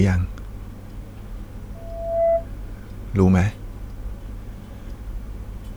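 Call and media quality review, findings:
Loudspeaker feedback squeal, 1.75–2.47 s: 670 Hz tone swelling over half a second to well above speech; mic–speaker loop gain exceeding one. Gradual build-up, unlike steady hum.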